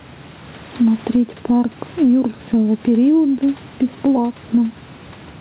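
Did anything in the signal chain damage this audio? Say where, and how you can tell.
Yes. The damage is gain pumping at the input gain and limiting stage, and it runs through the whole clip. The microphone gain is likely set far too high, so a fast compressor clamps down on each loud syllable. The gain swings by around 10 dB. The speech sounds squashed, with little difference between loud and soft parts. The narrowband call codec, which leaves nothing above 4 kHz, does not hide it.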